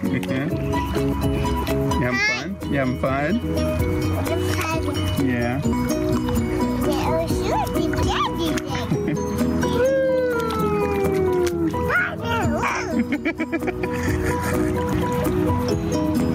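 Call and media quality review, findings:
Gain pumping, throughout: input gain likely set far too high, with a fast limiter clamping down on every loud sound. Gain swinging about 15 dB; dynamics squashed, loud and soft passages pressed together.

Audio missing between chunks at 3.43, 5.73, 8.03, 10.33, 12.63 and 14.93 s: likely a chunked recorder or processor dropping samples at each 2.5 s chunk boundary. Roughly a fifth of a second is lost each time, and the two sides are spliced straight together, giving regular skips 2.3 s apart.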